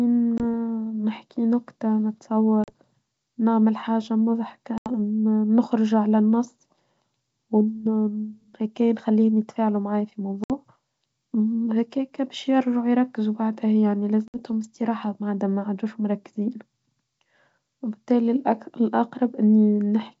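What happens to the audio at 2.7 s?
Packet loss on the ADPCM call hits from 2.64 to 2.72 s: about 40 ms, roughly two packets, goes missing and is filled with silence, leaving the decoder's predictor and step size out of step. The result is a hard-edged gap, then sound returning slightly distorted before settling.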